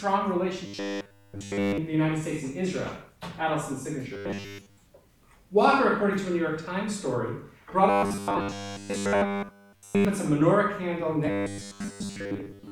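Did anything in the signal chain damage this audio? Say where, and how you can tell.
Yes. The damage sits at the driver or buffer stage. Robotic sound from repeated short buffers appears at 0.67–1.78 s, 4.14–4.82 s, 7.90–10.05 s and 11.26–12.71 s. Each stretch carries a rigid, metallic buzz at 100 Hz. That pitch means a 10 ms block is looping. The first and third stretches are almost entirely repeats. The second and fourth are mostly repeats. The likely cause is audio arriving too late, so the last block plays again while real audio is skipped.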